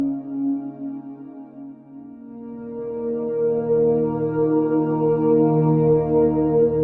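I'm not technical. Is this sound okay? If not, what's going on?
Yes, nothing is wrong with this music.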